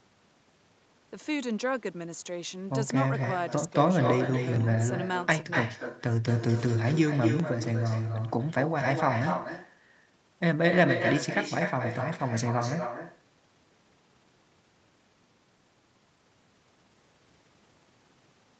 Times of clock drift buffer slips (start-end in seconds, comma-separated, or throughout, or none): 0.31-18.59